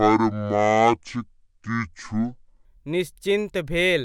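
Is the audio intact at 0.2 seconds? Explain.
No, 0.2 s falls inside a section at the wrong speed (0 to 2.65 s), likely played at 0.566 times speed, so the speech sounds slow and about ten semitones deeper, unlike a pitch shift alone.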